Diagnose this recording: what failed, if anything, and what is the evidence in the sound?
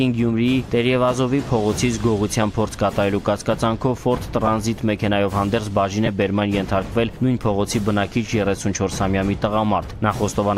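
The failure is at the wireless link: lost LE Audio frames, concealed by the LC3 decoder. Three brief dropouts occur, at 4.47 s (about 7.5 ms, which fits a single frame) and from 6.06 to 6.08 s and 8.56 to 8.58 s (about 15 ms each, which fits two consecutive frames). At each gap the decoder fills in by repeating the last spectrum with random phase signs, so tonal content smears briefly into a noisy blur.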